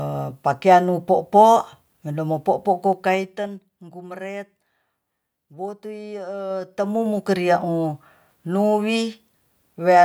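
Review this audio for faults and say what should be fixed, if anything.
Zipper noise at 2.87–3.70 s and 6.45–7.29 s: the level falls then rises by about 15 dB in 2 dB steps, around ten per second, each step clicking. Ramp gain changes smoothly per sample instead of stepping.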